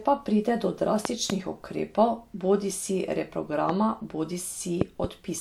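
Loud pops interrupt the speech three times: a pair between 1.05 and 1.32 s, a single pop from 3.69 to 3.72 s, and another pair between 4.81 and 5.07 s. The pairs stand roughly 20 dB above the speech, the single one around 15 dB. Each is a sharp transient laid over the speech, which continues underneath. The likely cause is a voltage step or pulse, from a plug, switch, static discharge or driver glitch, entering the signal chain.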